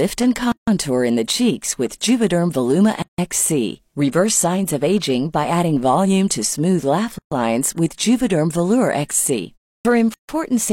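Gaps at joins of encoded pieces cut the speech at 0.52–0.68 s (156 ms, before "in the cheeks with"), 3.02–3.18 s (160 ms), 7.18–7.32 s (132 ms, between "smooth laugh" and "lines with") and 10.14–10.29 s (149 ms). Encoder start delay and end padding were left in at each join, so the waveform shows flat, blank stretches with smeared edges. The spectrogram shows empty vertical bands before the speech resumes where it stopped. At 9.80 s, after a 0.31 s pause, a clipped start after a pause loses about 49 ms. The output device was slow to wake, so the sound bursts in abruptly, with no onset ramp on the waveform.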